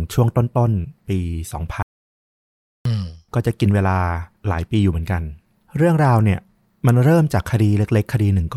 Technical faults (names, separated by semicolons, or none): audio dropout to silence